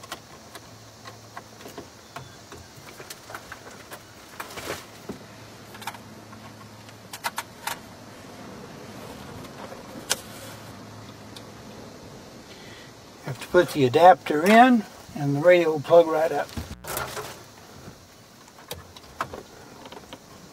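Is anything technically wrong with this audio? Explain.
Yes, there are two faults.

From 5.18 to 13.18 s the audio switches to an adaptive stream at a lower bitrate. The connection slowed, so the player fetched a leaner version of the stream. The sound points to a drop from roughly 96 kbit/s AAC to about 24 kbit/s HE-AAC. Codec artefacts rise and the treble disappears above 14.9 kHz. The switch is sudden, with no gap. On a spectrogram the energy above that line vanishes for those eight seconds.

At 16.72 to 16.84 s there is an intermittent contact. A loose cable or plug opens for about 105 ms, so the sound drops out or breaks up, with crackle at each edge and hiss while the line is open. On the waveform this shows as a brief collapse of the signal framed by sharp spikes. A spectrogram shows vertical broadband streaks at the edges and a thin noise floor between them.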